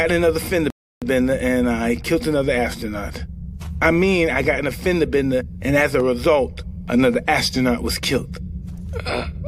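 At 0.70 s a rebuffering stall halts playback for about 0.32 s, then the audio resumes exactly where it stopped. The waveform shows a flat gap with no content missing.

A block of digital silence at 4.85 s (4 ms) and again at 6.00 s (1.33 ms, which fits a 64-sample buffer) zeroes the output, so each is heard as a tick. Each appears as a vertical broadband line on a spectrogram.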